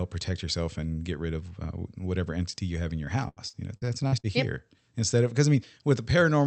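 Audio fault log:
3.23–4.27 s, repeated packet loss (robotic sound): audio packets kept going missing or arriving too late, leaving eight separate holes, the longest about 85 ms. The receiver patched each one by stretching the last sound forward, so about 27% of this stretch is filler, and roughly 160 ms could not be covered at all. The speech turns choppy, with fragments dropping out, over a call path whose content stops near 8 kHz.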